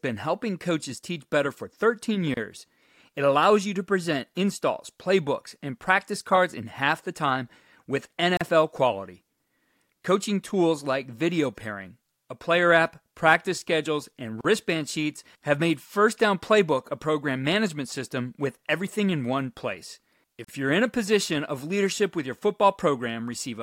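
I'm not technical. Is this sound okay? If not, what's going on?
No. There is a gap at a join of encoded pieces at 2.34, 8.37, 14.41 and 20.45 seconds, one every six seconds. The speech was saved in separate chunks and stitched together without trimming the extra silence each chunk gets at its edges, so the speech briefly drops out for about 30 to 40 milliseconds, then carries on.

Sample clock jitter appears from 21.14 to 23.61 seconds. The timing clock inside the recording or playback hardware wobbles, so the sound is measured at slightly wrong moments. The result is a faint hiss or roughness that gets stronger on loud, bright parts of the speech.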